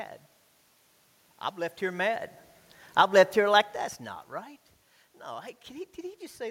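Automatic gain falling begins at 2.83 s, after "I've left here mad". The gain control judges the input too loud and gradually lowers its gain by about 3 dB until 3.91 s, just before "not right". The speech and the room noise behind it sink together.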